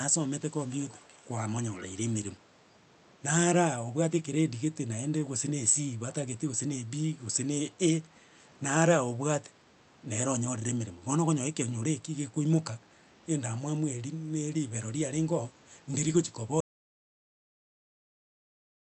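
Speech arrives over a call path where the far-end echo canceller likely let its own loudspeaker pickup through. This echo leak shows up as a faint, delayed copy of the speech, 373 ms late and roughly 25 dB below it, from 0.67 to 1.23 s and again from 1.75 to 1.85 s. Later the audio input was likely lost while recording carried on, causing an audio dropout to silence. At 16.61 s the sound cuts out into silence with no room tone, and it stays that way to the end.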